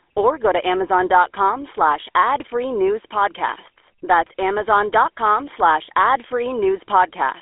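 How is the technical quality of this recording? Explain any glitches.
The technical quality is poor: the speech is narrowband and coarse from start to finish. Throughout the clip the voice has a buzzy, gravelly roughness, and it sits in a thin telephone band of roughly 300 Hz to 3.5 kHz with nothing above 3.8 kHz. This is GSM full-rate codec damage, plainly audible, which fits a 13 kbps full-rate coder. It models the vocal tract and excites it with sparse, regularly spaced pulses, so the fine texture of the voice is lost and replaced by that grainy buzz.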